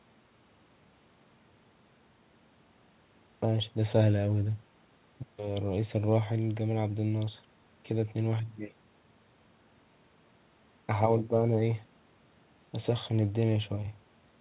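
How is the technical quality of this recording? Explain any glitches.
No glitches can be heard in the recording, which carries the narrowband character of a phone call passed through a G.711 A-law codec at 64 kbps, with nothing above 4 kHz.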